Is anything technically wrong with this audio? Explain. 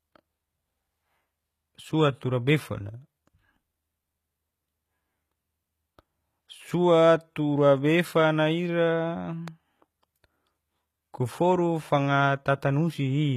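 Yes. Throughout, the speech has plainly audible HE-AAC compression damage, likely from low-bitrate coding around 20 kbps. The treble is rebuilt from copied lower bands and stops at 14.9 kHz. S sounds turn gritty and metallic.

From 9.48 to 9.50 s there is a single loud pop, a few decibels above the speech. It likely comes from a sudden electrical pulse, such as a switch or plug. The speech continues underneath.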